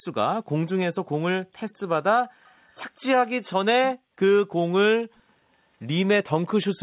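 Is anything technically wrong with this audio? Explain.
Yes. Around 2.45 to 2.66 s and again at 2.96 to 3.01 s, faint scraps of the speech return about 205 ms late, roughly 35 to 40 dB below the main signal. This is likely echo leak: a loudspeaker-side echo canceller let residual pickup through, sending a delayed copy back. The band stops near 4 kHz, consistent with a G.711-style call path.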